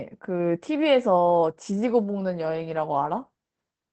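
Opus voice compression runs throughout the speech. Its SILK linear-prediction coder leaves nothing above 8.5 kHz and codes the excitation coarsely, fitting roughly 12 kbps. Unlike a plain low-pass filter, it adds a hoarse, slightly robotic roughness, not just muffling.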